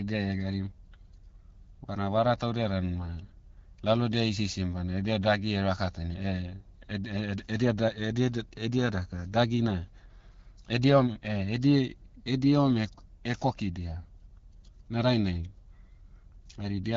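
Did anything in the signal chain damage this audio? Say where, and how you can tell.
No, nothing in the signal chain damaged this audio.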